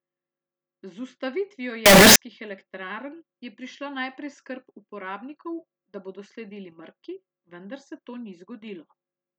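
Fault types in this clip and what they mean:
Signed and unsigned mixed up: from 1.86 to 2.16 s the speech turns into a blast of loud, harsh distortion, with quiet parts as loud as the rest. That's likely 16-bit samples read with the wrong sign convention, flipping the top bit so each zero crossing leaps across the full range.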